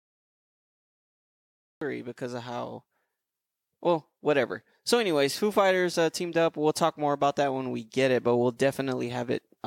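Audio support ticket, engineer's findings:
Cut-off start: digital silence 0 to 1.81 s, then speech enters mid-sound at "because of how". Capture began late. Waveform shows a flat line jumping abruptly to signal with no attack.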